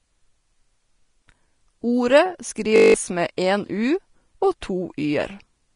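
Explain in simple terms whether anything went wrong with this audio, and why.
A system hang loop hits at 2.76 to 2.94 s: the computer froze, so a 20 ms scrap of sound repeated nine times, making a 50 Hz buzz and dropping about a fifth of a second.

Low-bitrate audio saved at a high bitrate runs throughout. Nothing sounds above 10.5 kHz, likely because a small, heavily squeezed file was later resaved as a larger one, which cannot restore the lost detail.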